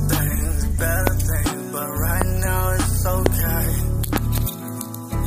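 Loud pops land at 1.07, 2.22 and 3.26 s, each a single sharp crack, then a double pop between 4.16 and 4.40 s. They jump roughly 20 dB above the sound, which carries on underneath, likely voltage spikes from a switch, plug or static discharge.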